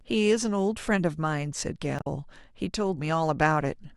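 At 1.97 to 2.07 s the speech breaks with a brief glitch lasting about 90 ms, caused by damaged data in a compressed stream. The decoder misreads corrupted frames and loses sync until it finds a valid header.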